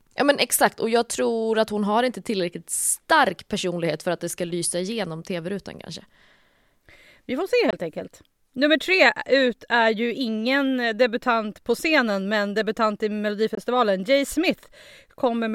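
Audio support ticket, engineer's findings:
Two gaps of about 21 ms in speech, at 7.71–7.73 s after "får se" and 13.55–13.58 s after "scenen men debutant i". The likely cause is a Bluetooth dropout, consistent with one lost packet each time. Speech resumes ahead, not delayed as with a buffer stall.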